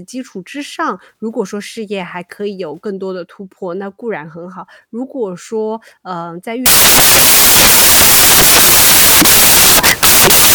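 From 6.66 s to the end, the samples are built from the wrong bytes, so low-order bits dominate and the speech turns into loud hiss.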